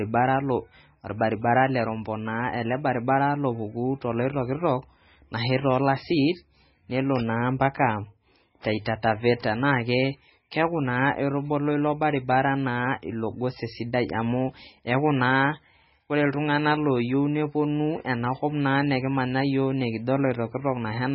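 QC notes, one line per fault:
Throughout, MP3 compression: the speech sounds watery and swirly, with nothing above about 5.6 kHz and weak detail flickering in and out between frames. This is likely a heavily squeezed MP3 encode, which fits a bitrate around 16 kbps starving the encoder of bits.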